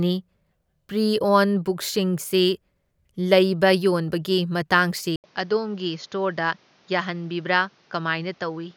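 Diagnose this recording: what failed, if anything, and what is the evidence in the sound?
At 5.16 s the speech goes silent for 80 ms, then returns duller and boxier. Nothing sounds above 6.9 kHz, level drops about 5 dB, and a new noise floor sits some 35 dB down. Likely an input switched to a poorer device, at the driver stage.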